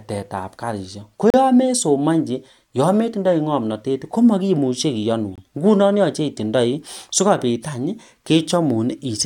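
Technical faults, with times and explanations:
1.30–1.34 s and 5.36–5.38 s, gap between stream segments: two silences of about 36 ms and 24 ms fall about 4 s apart, where segment timestamps leave holes filled with silence. Each shows as a blank vertical stripe on the spectrogram and a flat, hard-edged waveform break.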